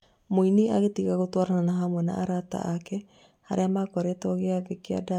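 Speech, with no technical fault to be heard. There is nothing here that needs a time or a cause.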